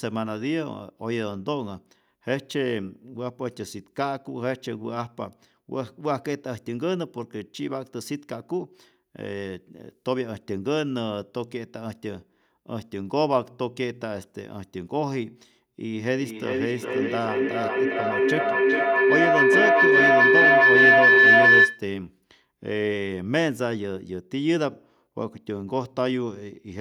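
At about 15.95 s a feedback howl kicks in and runs until roughly 21.92 s. Two devices in the same room are joined to the call, so the sound keeps circling from loudspeaker into microphone and back, picking up a bit of level each lap. It narrows to a shrill tone around 2 kHz, pulsing about every 0.4 s with the loop delay, and peaks at about 10 dB above the speech before it's cut.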